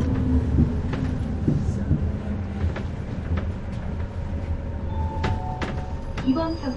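A recording of sounds carries audible MP3 compression throughout: nothing remains above 11.1 kHz, and weak spectral detail flickers in and out between frames, giving a watery, swirling texture. The hard treble cutoff and plainly audible artefacts fit a low bitrate near 48 kbps, the likely cause.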